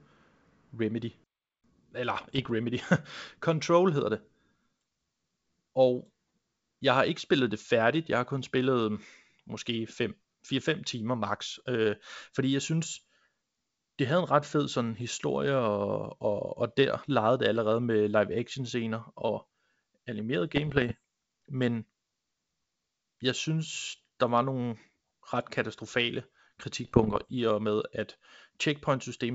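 Speech carried over G.722 wideband telephone coding, with its 7 kHz band and faint upper-band hiss, is hit by bit errors on an ADPCM link at 2.17–2.51 s, 20.56–20.95 s and 26.85–27.30 s, with an error rate of roughly 0.5 to 0.7 percent. Each flipped bit throws the decoder's step size and predictor off for a few milliseconds, producing pops, rough bursts and brief level jumps. On a spectrogram these appear as scattered broadband vertical streaks, and on the waveform as jagged spikes and sudden envelope changes.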